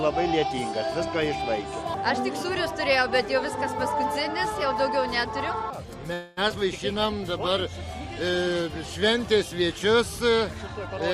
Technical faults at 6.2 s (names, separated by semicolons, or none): call audio freeze